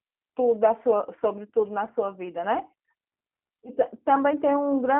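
G.729 codec coding runs through the whole clip, from start to finish. The speech is rebuilt from a vocal tract filter, a pitch predictor and a few pulses per short frame rather than from the waveform itself, which fits an 8 kbit/s VoIP link. The coding damage is plainly audible as a rough, slightly synthetic buzz. The sound sits in a telephone band of roughly 250 Hz to 3.4 kHz, with nothing above 3.8 kHz.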